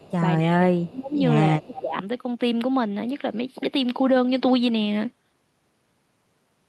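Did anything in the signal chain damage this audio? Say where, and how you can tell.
Yes, call processing. Echo leak appears at 0.00–0.12 s and 1.73–1.82 s: a faint copy trailing by 255 ms and 231 ms, about 30 dB and 15 dB down. It is likely from the far loudspeaker's residual echo getting past the canceller, visible as ghost harmonics offset in time.

Speech suppressed in double talk appears at 0.40–1.18 s and 1.56–1.96 s, with dips of around 20 dB. The waveform envelope sags there. The likely cause is the echo canceller attenuating the near talker while the far end also spoke.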